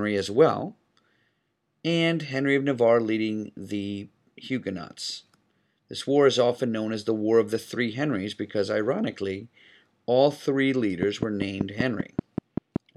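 From 11.03 s to 12.77 s, just after "because ironically all three", a train of clicks ticks over the speech at a regular 5.2 per second, roughly ten in all, peaking around 15 dB above the signal. The likely cause is interference or a faulty connection or power supply. They appear as evenly spaced vertical spikes on the waveform and thin full-band stripes on a spectrogram.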